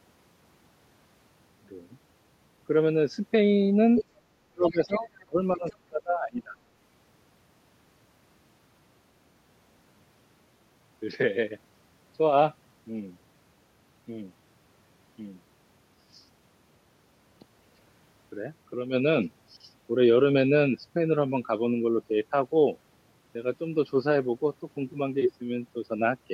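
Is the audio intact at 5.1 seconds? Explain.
No. From 4.7 to 5.23 s there is other side's voice leaking through: a second, fainter voice sits under the main talker, roughly 20 dB below it. This is likely residual loudspeaker echo. The far end's audio played from the talker's device reached the microphone, and the echo canceller did not fully subtract it, so scraps of that voice pass through.

Just before, from 4.46 to 5.08 s, there is speech suppressed in double talk. The talker's level dips hard, by around 35 dB at the deepest point, for about half a second in total. With both sides talking at once, the echo canceller likely could not separate near speech from echo and attenuated both. The dip has ended by 5.1 s, but the leaked voice is still audible there.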